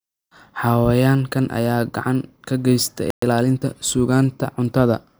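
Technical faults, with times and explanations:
3.10–3.22 s: playback stall. The speech cuts to silence for 120 ms mid-flow, then resumes where it stopped, unlike a dropout, which loses audio. The player likely ran short of data.
3.22–3.70 s: time-compressed catch-up. The speech runs about 1.25 times fast to clear the backlog. Pitch stays normal, unlike a plain speed-up, which raises pitch.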